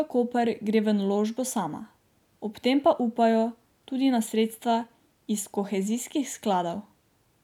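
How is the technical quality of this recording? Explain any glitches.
Technically sound: no audible glitches anywhere in the speech recording.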